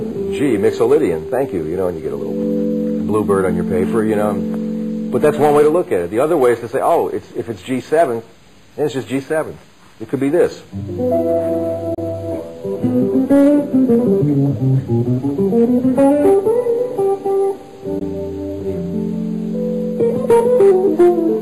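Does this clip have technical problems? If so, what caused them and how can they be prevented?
Yes. Brief silent gaps at 11.94–11.98 s and 17.99–18.02 s are likely a Bluetooth dropout: packets reached the headphones too late and were discarded. Unlike a splice or skip, the audio resumes as though it had played through the hole, with nothing repeated. Keeping the headphones close to the source, with no obstructions or competing 2.4 GHz traffic, prevents this.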